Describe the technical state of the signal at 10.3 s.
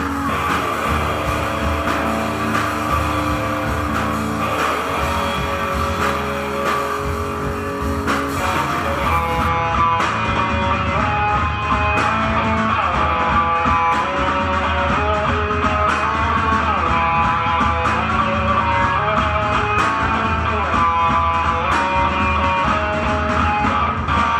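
At 10.3 s the signal is intact, with no audible fault at that moment.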